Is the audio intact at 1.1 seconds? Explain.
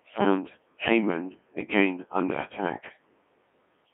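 No. At 1.1 seconds, as through the whole clip, the speech has passed through the Codec 2 vocoder. It transmits only pitch, voicing, energy and a spectral envelope, and the decoder rebuilds the voice from sine waves, which gives the heavy robotic buzz heard here. The damage points to a rate around 1.6 kbit/s. A spectrogram shows evenly spaced synthetic harmonic lines confined to 250 Hz to 3.4 kHz. The waveform is regular and periodic, with natural detail missing.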